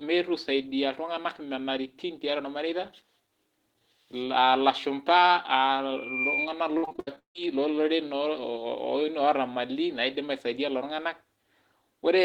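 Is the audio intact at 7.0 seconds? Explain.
No. From 6.77 to 7.40 s there is repeated packet loss (robotic sound): ten gaps in quick succession, the longest 160 ms, each patched by stretching the last sound over roughly 60% of the span. Unlike a single dropout, the constant repatching gives choppy sound with pieces missing.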